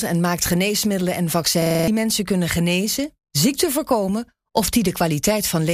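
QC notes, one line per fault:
1.62–1.88 s, system hang loop: right after "en maakt geneesmiddelen en", one 43 ms slice of audio repeats exactly six times at 23.4 Hz, a rigid machine-gun stutter, which fits a 2048-sample buffer replayed while the system stalled. Speech picks up again at "mensen kunnen" with roughly a third of a second missing. Unlike a dropout, there's no silence, and unlike packet-loss concealment, the copies are identical and perfectly periodic rather than smeared or faded.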